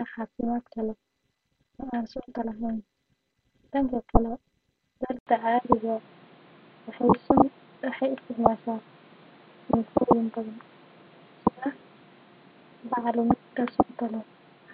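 It's a speech clip, and at 5.19 s there's a gap of about 80 ms, after which everything to the end sounds duller and boxier, with nothing above 4.6 kHz. A new background noise sits roughly 30 dB under the speech, while the loudness barely moves. That pattern points to an input switched to a poorer device, likely the system jumping to another mic or a headset's call profile mid-recording.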